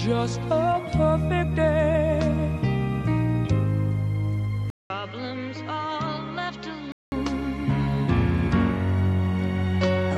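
An input switched to a poorer device is the likely cause of the change from 4.70 s to 7.12 s. A gap of 200 ms opens at the switch, then the sound returns roughly 10 dB quieter and dulled, with nothing above 7.6 kHz, as a narrower-band microphone path would give. A new background noise sits roughly 30 dB below the signal. At 7.12 s the fuller, brighter original input comes back.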